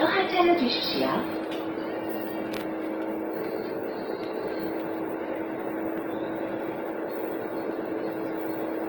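Throughout the clip, tonal content comes out noisy, rough and grainy rather than clean, a plainly audible kind of damage consistent with Opus compression in its music (CELT) mode. Band energies are held but the detail inside them is coarse, filled in by folding lower bands or by noise, so tones lose definition without the swirling holes typical of MP3. The bandwidth stays full, reaching to about 20.5 kHz, and the plainly audible graininess likely points to a low bitrate near 16 kbps.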